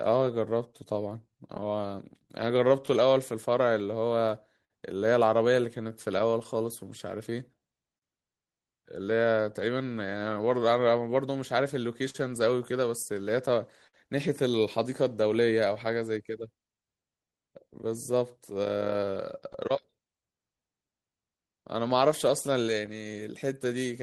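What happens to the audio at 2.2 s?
At 2.2 s the speech sits inside a stretch affected by clock drift between sender and receiver. The sender's clock runs roughly 4 percent slow against the receiver's, so the jitter buffer keeps draining and the receiver has to make up the shortfall. This mismatch is present for the whole clip, so the moment at 2.2 s carries the same slight instability as everything around it.

The drift shows up as repeated timing corrections running from 0.10 s to 23.94 s. To stay in step with the slow sender, the receiver repeatedly repeats short pieces of audio. This lowers the effective playback speed to 98 percent and adds about half a second in total across the span. Each insertion is small and unevenly spaced, and is heard as a faint hiccup or a slightly unsteady tempo rather than a clear break.

The same region also contains scattered short gaps, from 1.32 s to 15.46 s. 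About fifteen packets arrived late or went missing, one at a time. The receiver filled each hole by extending the preceding sound, around 300 ms in total and none longer than about 50 ms, which amounts to a couple of percent of that span. Near 2.2 s this can produce a brief tick or smear, while the speech stays intelligible.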